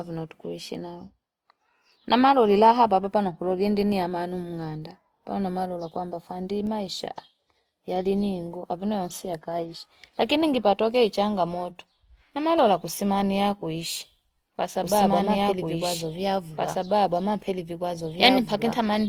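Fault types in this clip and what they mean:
Opus compression: Throughout the speech the tone turns grainy, rough and noisy rather than swirly, which likely comes from Opus in its music (CELT) mode at around 24 kbps with full bandwidth kept. The damage is plainly audible. On a spectrogram, energy stays spread across every band up to the top with few holes, but fine harmonic lines look smeared and speckled with noise where bands were filled by folding or noise rather than real detail.
Doubled audio track: From 14.83 s, just after "ne kusimamia kuishi kwa", to the end of the clip, a second full-band copy of the speech runs about two seconds behind the original at roughly the same level. It is likely a second capture by a slower path or an edit holding two copies out of step. The copy starts abruptly with no decay or room colour, and on a spectrogram the same patterns repeat, offset by that fixed gap.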